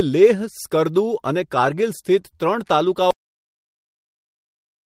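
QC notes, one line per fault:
2.21–2.37 s: short concealed packet loss. About 20 ms of audio never arrived; the receiver extended the preceding sound to bridge it, leaving a brief smear and stretching timing by roughly 20 ms.
2.23–2.25 s: lost packet rebuilt from error correction. A 20 ms stretch, fitting one lost packet, plays from a low-bitrate backup copy, so it sounds rougher and noisier without a gap.
3.11 s to end: audio dropout to silence. The sound cuts off mid-flow into silence with no room tone; input was likely lost through a disconnect, failed link or mute.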